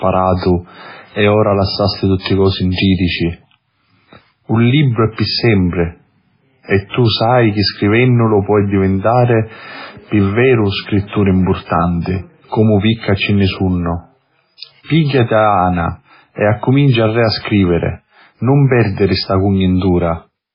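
Speech, with heavy damage that is likely from MP3 compression throughout. The sound is watery and swirly. Weak frequency parts drop in and out from moment to moment, because too few bits force the encoder to zero them. Nothing is heard above 5.3 kHz, so the treble is cut off flat. S sounds turn metallic and attacks smear. All of this fits a very low bitrate, around 16 kbps. There is also a pre-echo from 6.89 to 6.94 s. A short hiss, spread over 47 ms, leads into a sharp attack, and the attack itself sounds soft. This happens because the codec spreads its noise over a whole block. The noise meant for the loud onset fills the quiet gap just before it.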